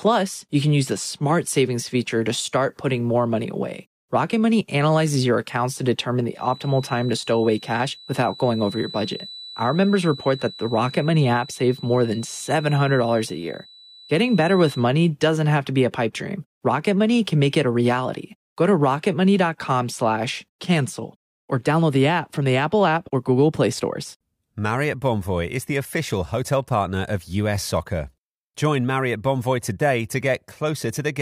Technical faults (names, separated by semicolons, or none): feedback whistle